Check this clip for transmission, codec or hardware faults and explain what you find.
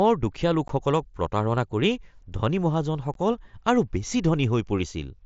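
There is one fault: unconcealed Bluetooth headset packet loss at 0.68 s and 3.14 s. Each gap is a 15 ms hole with abrupt edges. That fits two lost headset packets left unfilled.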